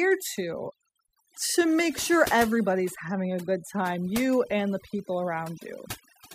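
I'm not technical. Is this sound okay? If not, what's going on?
No. From start to finish this speech shows overdone noise removal. A noise-cleaning tool was set too strong, so it shut off whole slices of the sound it mistook for background hiss, and the quiet parts of the voice went too. That's why the gaps between phrases drop away and break up into twinkling, warbling specks. Unlike plain muffling, which only dulls the sound, this leaves glittery residue behind.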